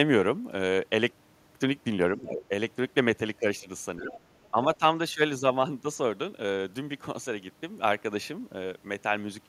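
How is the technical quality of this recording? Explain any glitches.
The recording has brief echo-control glitches in the speech. There are four dips and one faint leak of a second voice.

Speech suppressed in double talk occurs at 2.18–2.5, 3.97–4.17, 4.51–4.57 and 4.79–4.83 s. The level drops by about 10 dB, and by about 15 dB at the last one. The likely cause is an echo canceller turning down the talker while both sides spoke. On the waveform these show as short notches, and on the spectrogram as dimmed bands.

The other side's voice is leaking through at 4.13–4.18 s. A faint scrap sits about 20 dB below the speech, likely residual loudspeaker echo the canceller missed. On the spectrogram it appears as weak extra harmonics.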